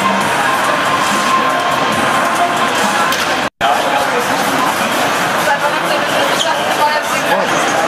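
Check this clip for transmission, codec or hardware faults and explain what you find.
One fault: a loud pop. A sudden voltage step, likely from a plug, switch, static discharge or driver glitch, entered the signal path at 4.00 to 4.03 s. It is heard as a single sharp pop, peaking roughly 5 dB above the surrounding sound, which continues underneath.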